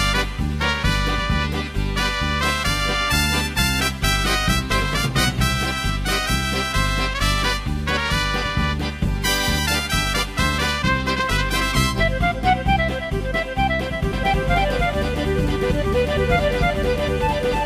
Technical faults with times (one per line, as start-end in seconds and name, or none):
14.13-17.65 doubled audio track